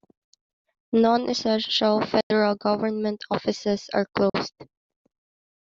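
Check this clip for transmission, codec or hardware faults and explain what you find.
Two short Bluetooth dropouts interrupt the speech. The first runs from 2.21 to 2.31 s, just before "government offices are"; the second from 4.30 to 4.36 s, just after "government offices are". Each is a hole of silence, about 93 ms and 46 ms, after which the speech resumes further along as though it had kept playing. This likely comes from wireless audio packets arriving too late at the headphones and being discarded, consistent with a handful of lost packets each time.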